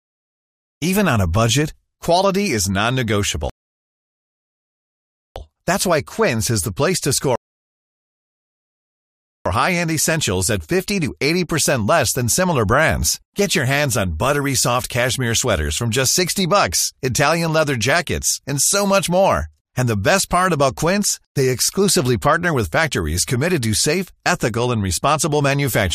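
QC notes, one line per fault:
3.50–5.36 s and 7.36–9.46 s, rebuffering stall: playback drops to silence for about 1.86 s, then 2.10 s after "is the place to", resuming exactly where it stopped. The player starved of downloaded audio and waited, so no speech is lost, only time added.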